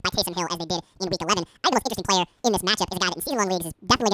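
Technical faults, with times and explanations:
Throughout: wrong sample rate. The speech runs at twice its natural speed and sits a full octave (12 semitones) high, sounding hurried and thin. The samples are clocked out twice as fast as they were captured, which fits 16 kHz audio being played at 32 kHz.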